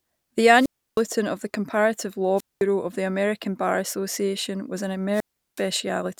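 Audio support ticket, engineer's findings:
Wireless microphone squelch dropout at 0.56–1.04 s, 2.36–2.63 s and 5.12–5.63 s. Hiss rise, then near-silent holes of about 320, 210 and 370 ms before speech returns. RF fade at the FM receiver; squelch gating output.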